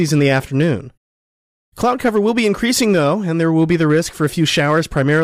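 Hard clipping runs through the whole speech clip from start to finish. The signal was driven about 4 dB past what one stage in the chain could pass, so the loudest peaks were cut off flat, on the order of one or two percent of samples. The flattened tops add harmonics high in the spectrum, heard as brief crackle and grit on the stronger syllables rather than a constant fuzz.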